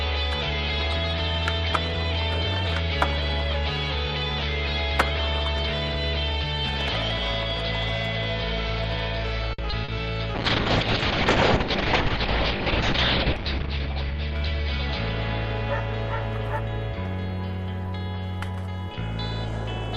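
At 9.53 s a short stall from a late packet holds the sound for about 50 ms: the jitter buffer ran dry, so the last sound was stretched until the packet arrived and playback resumed without losing anything. A waveform shows a repeated, slightly dipping cycle.

Short concealed packet loss follows at 9.70 s and 9.84 s, with about 20 ms and 40 ms never decoded in time and filled by extrapolating the preceding sound. Each heard as a brief smear or wobble, with a smoothed, blurred patch on a spectrogram.

From 10.35 s to 16.17 s a call bitrate drop takes the encoder from 64 kbps down to 6 kbps, lowest for about 3 seconds. The audio turns rough and muffled, and a spectrogram shows the top edge falling from 20 kHz to 6 kHz.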